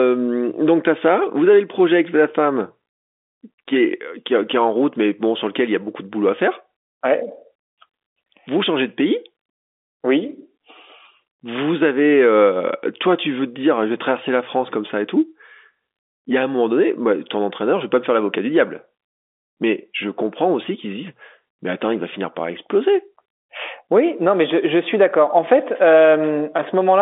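Listening through this speech recording, heard over a telephone line with nothing above about 3.7 kHz, nothing stood out as a problem.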